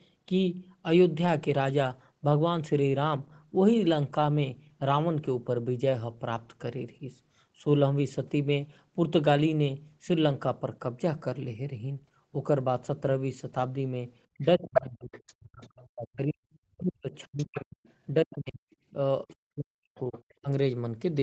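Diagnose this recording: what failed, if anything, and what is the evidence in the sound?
The talker's voice dips sharply and breaks into pieces from 14.38 to 17.81 s, again at 18.24 to 18.62 s and 18.93 to 20.48 s, falling by roughly 40 dB at worst. This is speech suppressed in double talk in the call processing. The echo canceller likely mistook overlapping speech for echo and attenuated both.

A second voice comes through in short scraps at 14.41 to 14.81 s, 15.12 to 15.67 s, 17.37 to 17.92 s and 19.98 to 20.34 s. The first scrap is about as loud as the talker, and the later ones are far quieter. This is the other side's voice leaking through, likely residual loudspeaker echo that the canceller failed to remove from the microphone signal.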